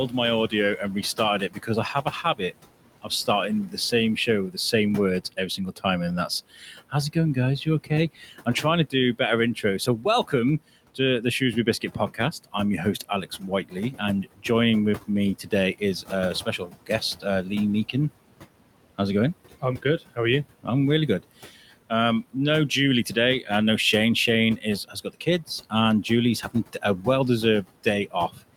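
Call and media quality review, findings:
Noise suppressor artifacts, throughout. Room noise (about 16 dB under speech) pumps down about 18 dB between phrases and returns under speech. Per-frame band gains are tracking noise estimate, not settling.

Speech cut by the noise suppressor: 1.17–4.73, 5.32–14.44, 15.07–17.25, 19.61–20.68, 21.23–23.49, 24.57–27.04, 27.64–28.42 s. Soft consonants and endings swallowed, drops about 13–17 dB, totalling well over a second at 5.32–14.44 s. Suppressor misclassifying quiet speech as noise.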